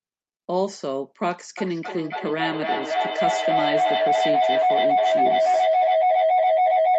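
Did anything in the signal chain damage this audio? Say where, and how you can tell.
Yes. Feedback howl starts at 1.58 s and runs to the end: an acoustic loop between two call devices in one room. A spectrogram shows a narrow band near 700 Hz, with the loop repeating about every 300 ms, and the waveform swells to about 7 dB above the speech.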